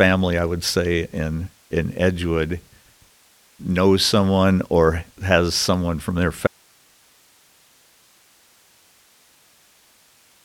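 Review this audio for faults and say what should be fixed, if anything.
Audio dropout to a faint residue at 6.47 s, after "has someone from their": speech cuts abruptly to low hiss until the end, likely a lost source feed. Prevent it by securing the source connection and monitoring the input throughout the recording.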